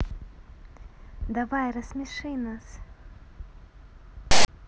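File tags played as audio appear from 4.31 to 4.48 s, near the end of the clip. A block of text metadata has been decoded as if it were samples, so its character bytes become a loud, harsh rasp, starting and stopping with hard edges. The zero padding that follows the text decodes to silence, so the burst of static drops straight to nothing for the rest of that 0.17 s stretch.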